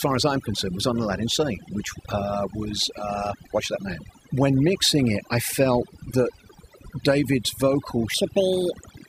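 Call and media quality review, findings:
Overdone noise removal, whole clip: background dropped and broken up into twinkling specks. Noise suppressor set too aggressive, pulling individual frequency bands down or off near its noise estimate and removing quiet voice detail with them.

Section at the wrong speed, 8.14 s to end (9.08 s): voice suddenly high and hurried, running 1.58 times fast, pitch up about seven semitones. Likely a playback or edit stage clocking this segment at the wrong rate, shifting speed and pitch together.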